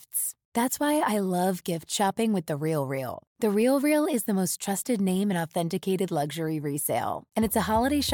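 No technical faults are audible.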